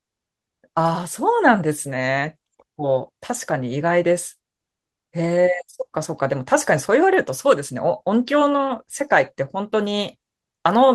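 No technical fault can be heard anywhere in the speech, with the signal holding steady and continuous throughout.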